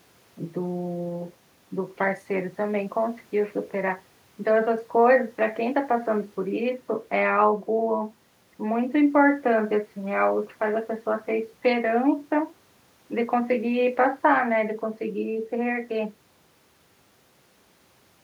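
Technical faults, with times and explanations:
No technical faults can be heard in this speech recording; the signal stays steady and intact throughout.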